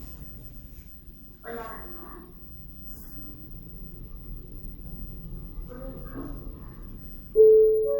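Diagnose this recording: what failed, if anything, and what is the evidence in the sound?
Generation loss, throughout the recording, at the codec stage: the sound is swirly, smeared and hollow, attacks blur, and content stops at about 20.1 kHz. The likely cause is around ten repeated MP3 encode passes, pointing to roughly 96 kbit/s, each requantising on a shifted frame grid.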